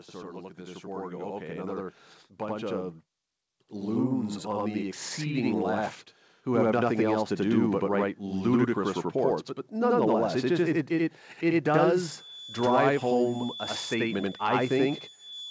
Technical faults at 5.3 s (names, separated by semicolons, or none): channel delay (doubling); automatic gain rising